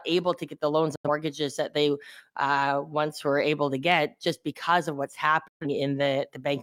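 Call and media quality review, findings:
Digital broadcast dropout, two holes in the speech: 0.95–1.09 s and 5.48–5.67 s. Quick fade to silence over about 8 ms, then back. The receiver lost sync or failed checksums and muted, which fits two then three dropped ~43 ms frames. That audio's gone.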